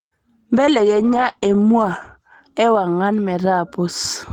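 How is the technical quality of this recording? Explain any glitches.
The speech shows one glitch, a call bitrate drop. From 0.58 to 3.13 s, the encoder codes more coarsely, with the sound going rough and muffled for about 1.5 s. That fits the bitrate falling from 32 to 14 kbps.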